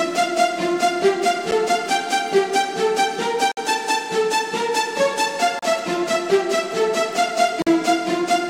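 At 1.51 s a short hole of about 9 ms cuts into the sound. Three more follow, at 3.52 to 3.57 s, 5.59 to 5.63 s and 7.62 to 7.67 s, each lasting 34 to 54 ms. Each is a gap between stream segments. Two adjacent 2-second segments have time stamps that do not quite meet. The player fills the difference with silence. The edges are hard, and the holes recur about every two seconds. Nothing is lost.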